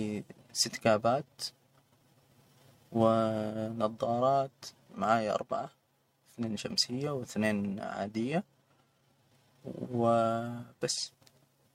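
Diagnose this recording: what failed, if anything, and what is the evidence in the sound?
Nothing failed: no stage of the chain shows any fault, and there is nothing in the sound to point to one.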